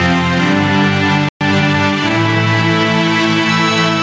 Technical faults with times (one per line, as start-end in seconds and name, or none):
0.00-4.02 gain pumping
1.29-1.41 playback stall
1.41-2.59 time-compressed catch-up